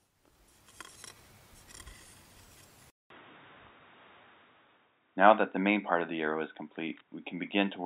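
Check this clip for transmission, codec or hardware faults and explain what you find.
One fault found. At 2.90 s the input likely switched to a poorer, narrower-band device: a 200 ms silence, then boxy, dull sound with nothing above 3.8 kHz.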